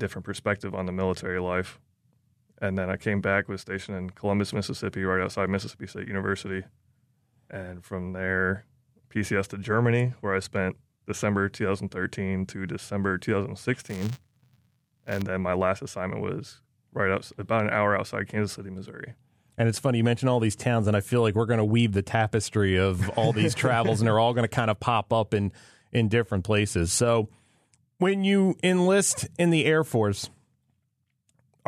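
Speech, with a stretch of buffer tearing from 13.78 to 15.22 s, just before "then my last assignment". You get a robotic buzz at 172 Hz, which fits a 256-sample buffer: each period carries a small slice of audio roughly 20 ms old, hard-spliced in.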